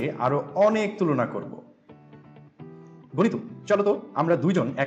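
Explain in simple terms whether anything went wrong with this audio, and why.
A time-stretched section runs from 2.95 s to the end: the sound speeds up about 1.55 times and turns rushed, likely from software squeezing it while keeping pitch.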